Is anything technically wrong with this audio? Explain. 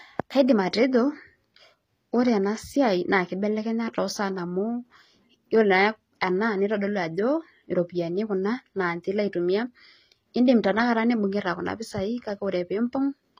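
Yes. Throughout the speech, the s sounds and other treble come out gritty and metallic, and nothing is heard above 15.4 kHz. This is likely HE-AAC compression, which fits a low bitrate around 24 kbps: the upper band is rebuilt from copied lower bands, so its harmonics never match the real ones.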